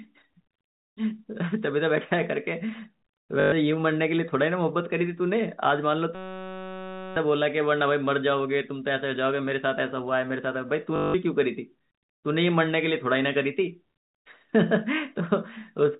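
At 3.4 s the speech stutters briefly: packet loss with the last packet repeated, lasting 0.12 s until 3.52 s. The receiver kept replaying the final good packet to fill the gap, and each repeat restarts out of step with the pitch. The run buzzes with a robotic edge at the packet rate, which fits 20 ms packets, so roughly six packets went missing.

From 6.15 s to 7.16 s a system hang loop takes over. The host stalled while the audio hardware kept cycling the same 5.33 ms stretch of its ring buffer, which fits a 256-sample buffer. That tiny piece repeats exactly at 188 Hz, so about a second of speech is replaced by a steady, pitched buzz with no variation until the system recovers.

At 10.96 s the packet-loss stutter returns for 0.18 s, to 11.14 s. It is the same mechanism, with the last packet replayed repeatedly, buzzing at the packet rate. It is longer this time, consistent with about nine lost packets. 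The G.711 telephone coding itself is working as expected here, band-limited below 4 kHz with at most faint quantisation noise.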